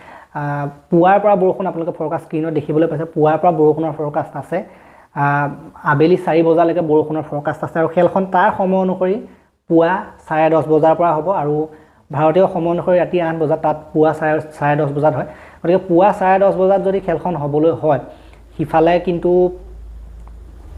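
From 1.86 s to 8.43 s there is a call bitrate drop: the call's bandwidth estimate collapsed and the encoder was pushed to spend far fewer bits, which fits a fall from about 96 kbps to about 26 kbps. Coarser coding at that rate thins and roughens the sound, with a muffled, watery quality at its worst for about 4.25 s, before the bitrate recovers and the fuller sound returns.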